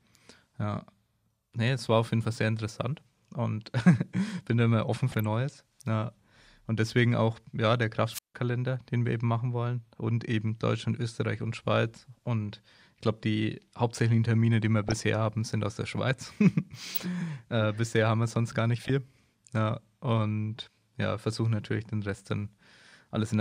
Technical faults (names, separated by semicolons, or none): DAB burbling; wireless microphone squelch dropout